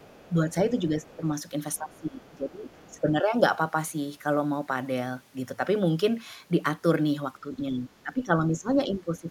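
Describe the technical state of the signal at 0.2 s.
At 0.2 s the other side's voice is leaking through, from 0.0 to 0.31 s. A faint second voice sits far beneath the main speech, roughly 30 dB down. The likely cause is a loudspeaker feeding the microphone, with the echo canceller missing a remnant.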